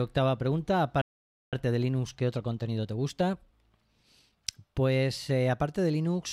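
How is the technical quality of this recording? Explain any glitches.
Two linked glitches affect the recording, a playback stall followed by a time-compressed catch-up.

From 1.01 to 1.53 s the output goes silent for about 0.51 s, then resumes where it stopped. This playback stall is likely the player running dry of buffered data. Unlike a dropout that skips material, nothing is lost; the sound simply pauses and picks up again.

From 1.53 to 4.53 s comes time-compressed catch-up: the player trims its backlog by removing small slices and cross-fading the joins, running about 1.1 times fast. Pitch stays normal, unlike a sped-up resample that raises pitch.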